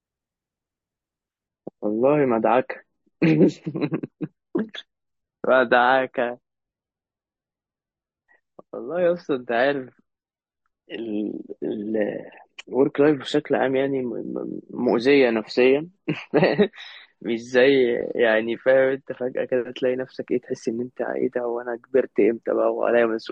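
From 1.48 s to 19.48 s the speech drops to a lower bitrate in the adaptive stream, switching without a gap. Everything above 8.3 kHz vanishes, sounding dull and artefact-heavy, which fits roughly 30 kbit/s MP3.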